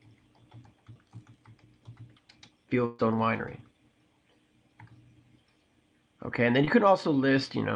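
Short concealed packet loss at 0.93–0.97 s and 6.65–6.69 s: about 20 ms of this network-delivered audio never arrived, so the receiver extended the preceding sound and blended back, leaving a brief smear. A burst of packet loss at 2.85–3.01 s dropped about 140 ms in a row. The receiver continued and faded the last sound for about 135 ms without falling silent, and the audio then resumes further on with that stretch missing.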